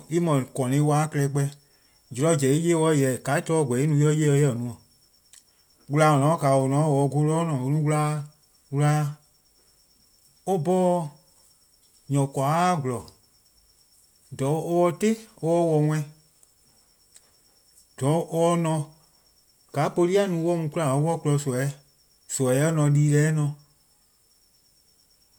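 Listening through the speech recording, nothing stood out as a technical problem at any point.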